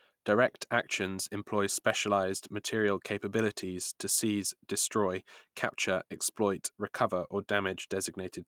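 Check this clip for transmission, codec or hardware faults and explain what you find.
No transmission, codec or hardware faults can be heard in this speech clip. The Opus voice compression is working normally in hybrid mode, with the band reaching nearly 23.5 kHz and only light coding texture, which fits a rate of around 24 kbps.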